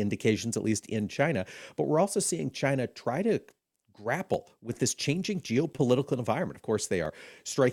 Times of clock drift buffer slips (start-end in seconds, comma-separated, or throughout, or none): 0.26-7.05